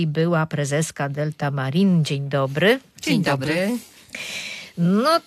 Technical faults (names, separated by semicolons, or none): none